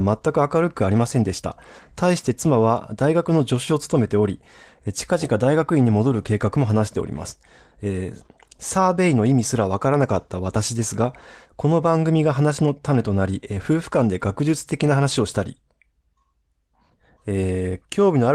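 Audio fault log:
Nothing stood out on listening to this speech clip.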